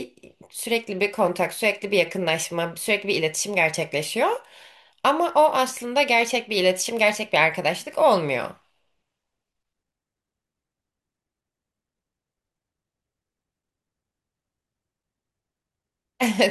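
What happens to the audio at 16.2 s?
At 16.2 s the speech plays through cleanly, with no dropout, click, distortion or other fault.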